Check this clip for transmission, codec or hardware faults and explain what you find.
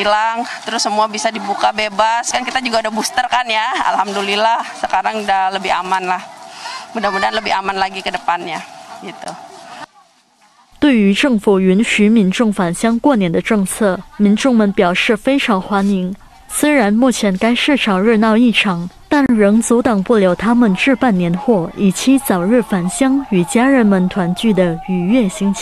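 Two short dropouts interrupt the audio, both gaps at joins of encoded pieces.

Gap at a join of encoded pieces, at 9.25 s (16 ms) and 19.26 to 19.29 s (31 ms), spaced 10 s apart: separately encoded segments were spliced without trimming encoder delay and end padding, leaving brief silences with smeared edges before the sound resumes where it stopped.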